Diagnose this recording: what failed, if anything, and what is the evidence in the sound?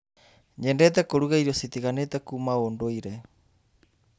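Nothing failed in this recording, and the sound gives no evidence of a fault at any stage.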